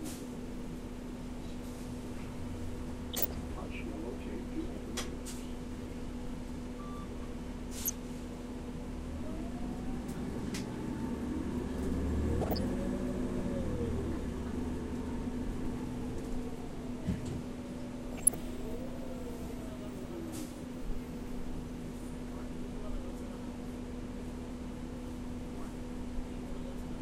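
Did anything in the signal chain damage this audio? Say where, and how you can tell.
Yes: DAB burbling. Weak reception let bit errors slip past error correction into the MP2 data, so short noise blips land in single sub-bands at 3.11–3.32, 7.85–7.94, 12.41–12.70 and 18.13–18.34 s.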